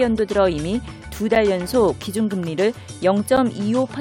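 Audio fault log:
1.35 s and 3.37 s, gap between stream segments: two brief holes of silence with hard edges, about 8 and 10 ms long, spaced 2 s apart, which fits segment boundaries every 2 s. At each join the timestamps leave a small gap that the player fills with silence, adding 7.5 and 9.1 ms. Unlike a dropout, nothing is lost: the sound resumes exactly where it stopped, just slightly later.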